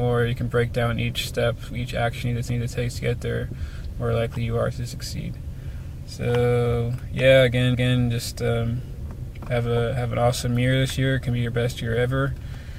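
At 2.50 s, overlapping chunks cause a stutter lasting to 2.75 s. The audio was handled in 5 s chunks, and the next chunk began before the previous one ended. A 250 ms piece therefore plays twice, heard as an abrupt repeat at the join.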